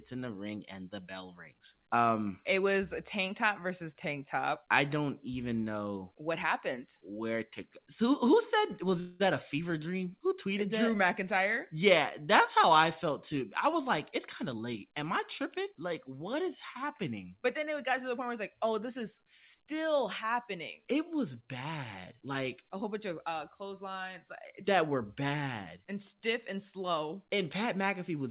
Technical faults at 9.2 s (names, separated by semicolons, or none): call audio freeze